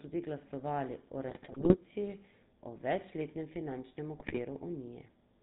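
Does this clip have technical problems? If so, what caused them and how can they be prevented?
Yes. The whole clip carries GSM full-rate codec coloring, a buzzy, gravelly roughness with nothing above 4 kHz, which fits the 13 kbps codec. Using a wideband codec prevents it.

GSM bit errors cause squawks and gargling from 1.28 to 1.79 s, after "tudi glasovali o", and from 4.18 to 4.40 s. Corrupted frames distort the spectrum and level. A stronger radio link prevents this.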